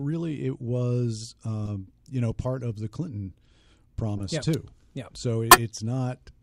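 At 1.66 to 1.69 s, just before "you know part of", a corrupt frame decoded produces a short, fairly quiet blip, around -25 dBFS. Damaged bits in one compressed frame were played as if valid, so energy lands at the wrong frequencies. Its length matches a single frame, and it has a foreign chirpy tone. That separates it from a dropout, which would be a gap, and from clipping, which follows the level of the speech.

A similar quiet blip at 4.17 to 4.22 s lasts about two frames.

From 4.34 to 4.55 s comes hard clipping, about 4 dB of overdrive. The speech peaks exceed what the stage can pass and are cut flat, adding high harmonics heard as crackle on the peaks. Unlike a corrupt frame, the distortion tracks the speech's own peaks and pitch rather than adding an unrelated sound.

At 5.51 to 5.58 s a third corrupt frame is far louder, peaking around -5 dBFS. It lasts roughly three frames and is heard as a sharp squeak or noise burst.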